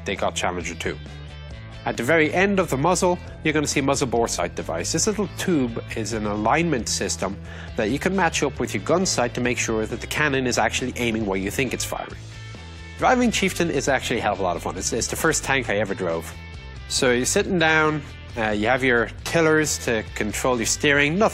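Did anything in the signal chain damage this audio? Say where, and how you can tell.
Yes, at the codec stage. Compressed frames were skipped at 4.38, 5.42 and 17.06 s. Each time the sound jumps ahead by about 20 ms, because frames missing from the file or refused by the decoder as damaged are left out.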